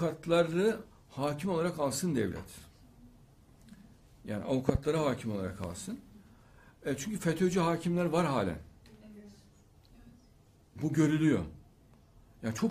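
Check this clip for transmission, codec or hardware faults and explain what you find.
Two loud pops stand out. From 4.69 to 4.77 s a double pop rises about 20 dB above the signal, and at 5.64 to 5.66 s a single, weaker one reaches about 10 dB. Each is likely a voltage spike from a plug, switch or driver glitch, with the sound continuing underneath.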